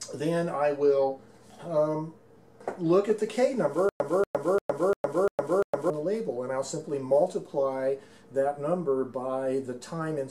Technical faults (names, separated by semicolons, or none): stutter with silent gaps